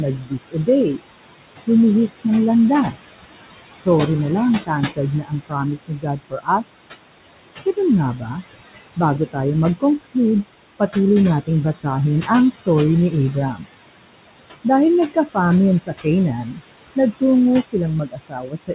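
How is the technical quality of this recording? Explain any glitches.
The recording has two audible faults, both from an aggressive noise suppressor. The audio is narrowband, with nothing above 4 kHz, which fits a G.711 mu-law call path. Room noise sits about 12 dB below the speech.

Noise suppressor artifacts run through the whole clip. The suppressor treats the steady background as noise and pulls those bands down by about 21 dB, frame by frame. The noise drops away in pauses and swells back under the speech.

Speech cut by the noise suppressor happens in eight places:
0.18–1.0 s, with drops of about 21 dB
1.67–2.25 s, about 11 dB
2.92–3.1 s, about 15 dB
3.74–3.87 s, about 17 dB
4.66–6.83 s, about 22 dB
7.66–8.36 s, about 8 dB
8.96–13.64 s, about 20 dB
14.64 s to the end, about 21 dB

In each place the suppressor mistook quieter parts of the speech for background and turned them down with it. 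The affected stretches add up to roughly a second in the 4.66–6.83 s window and a fraction of a second in each of the other windows up to 13.64 s. Those syllables sound swallowed and faint.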